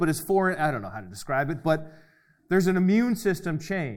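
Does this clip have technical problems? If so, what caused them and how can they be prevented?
No, this clip has no technical problems, so there is nothing to prevent.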